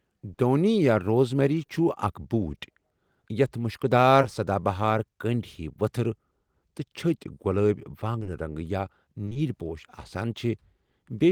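Brief smears and wobbles in the speech at 0.33–0.39 s, at 4.21–4.25 s between "یَتھ مُشکٕدار" and "سدا بہار", at 8.19–8.27 s, and at 9.25–9.37 s after "رنٛگ یا" are short concealed packet loss: 20–40 ms gaps that the receiver covered by extending the preceding sound.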